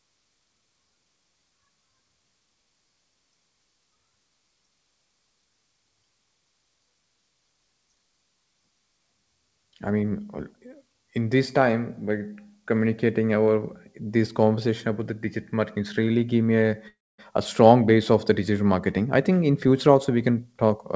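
From 16.88 to 17.20 s the speech stops for about 0.3 s. A brief buzzy continuation of the last sound fades out, followed by roughly 240 ms of silence. The talk then resumes where it broke off, with nothing skipped. This is a call audio freeze. Packets were likely held up in transit, leaving the jitter buffer empty, so the receiver stretched the final sound and then went quiet. Because the stream picks up without loss, about 305 ms of extra delay has been inserted.

From 18.98 to 20.70 s the speech sounds hurried, running at about 110% of normal speed while the pitch stays the same. This is a jitter buffer speed-up. The buffer was holding more audio than its target, so the receiver trimmed many pitch-period-length slivers in quick succession, removing around a fifth of a second in total. Throughout, the G.722 call path leaves nothing above 8 kHz.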